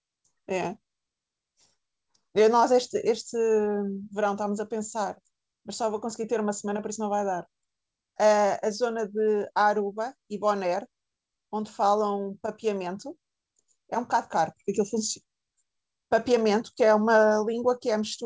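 No technical faults can be heard anywhere in the speech. It has the character of a working call path, with the coding sound of a wideband codec such as G.722 and nothing above 8 kHz.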